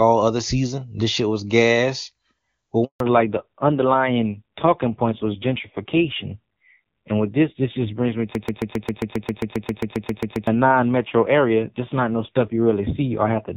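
At 2.84 s the speech cuts out abruptly and stays silent for 160 ms, until 3.00 s. This handover gap happens when the call is passed between networks and no speech frames arrive while the link switches, so whatever was said then is gone.

From 3.00 s to the end, the speech sounds duller and rougher. Everything above 4 kHz is missing, whereas the clear wideband HD Voice before the gap reached higher. This fallback to narrowband fits a drop from AMR-WB at around 23.85 kbit/s to low-rate AMR-NB, about 5.9 kbit/s.

Between 8.35 and 10.47 s, a 134 ms fragment repeats exactly, back to back, 16 times, like a broken-record loop. The likely cause is a stall in the stream or encoder that kept resending its last fragment, so the audio due in that stretch never plays.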